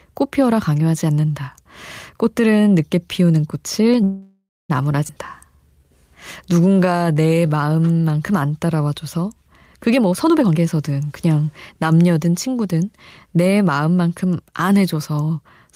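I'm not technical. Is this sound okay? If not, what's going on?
No. At 4.03 s the speech stalls for about 0.66 s, until 4.71 s: a call audio freeze. The last sound trails off into a fading buzz or hiss and ends in roughly 0.23 s of silence, likely because packets were held up on the network. Speech then resumes exactly where it stopped, so nothing is lost.

At 5.07 s there is a skip ahead. Around a third of a second of speech is simply gone, and the sound on either side of the gap is butted together with almost no pause, so the speech jumps abruptly forward.

From 6.51 s to 8.12 s there is a jitter buffer slow-down. The receiver, short of stored audio, repeated tiny slices of sound many times, stretching this part by 0.26 s. Speech plays at 84% speed, drawn out but at normal pitch.

From 9.96 s to 10.60 s the opposite happens, a jitter buffer speed-up. With too much audio queued, the receiver cut out many tiny slices, roughly 0.3 s in total. 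That stretch runs at 138% speed and sounds rushed, though the pitch stays the same.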